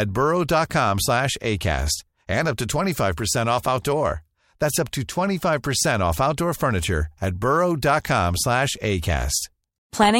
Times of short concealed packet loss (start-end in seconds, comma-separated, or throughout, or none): none